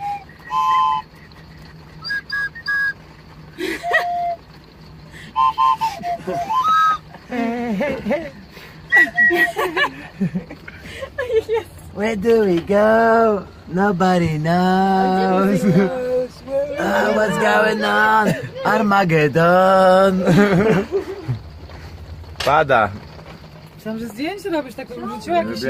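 No technical faults can be heard anywhere in the audio; the signal stays continuous and steady throughout.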